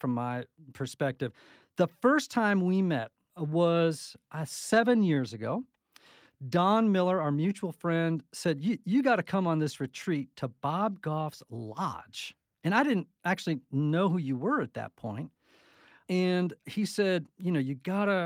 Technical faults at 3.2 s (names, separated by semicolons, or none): clock drift between sender and receiver; repeated timing corrections